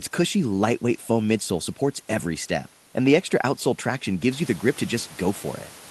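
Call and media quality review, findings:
No faults found in this speech recording.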